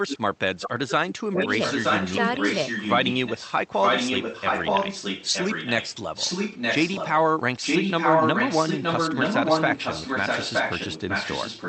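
An echo leak begins at 0.08 s. It most likely comes from a far end playing the call on a loudspeaker, where the echo canceller lets part of its microphone pickup return. A copy of the speech comes back about 0.92 s late. It first appears in short scraps at 0.08–0.18 s (about 5 dB below the speech), 0.6–0.69 s and 0.88–0.92 s (about 10 dB down). It then forms long stretches at 1.37–5.93 s, 6.14–7.23 s and 7.61–11.68 s, where it sits as loud as the speech itself.

Speech suppressed in double talk overlaps this from 0.74 to 1.49 s. The echo canceller was likely unable to tell the local talker from the returning echo and attenuated both. The speech drops by as much as about 30 dB over roughly 0.7 s of that span.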